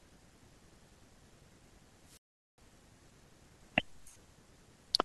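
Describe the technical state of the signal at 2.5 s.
At 2.5 s the signal is inside a wireless microphone squelch dropout running from 1.99 to 2.63 s. The FM carrier from the transmitter weakens far enough that the receiver's squelch gate closes, cutting the output rather than passing raw RF noise. Across the span, hiss and static rise briefly, then the speech drops into a hole of near silence lasting about 0.41 s before it comes back.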